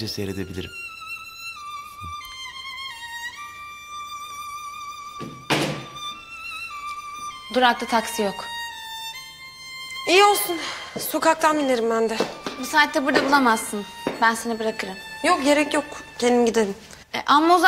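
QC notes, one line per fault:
No fault found.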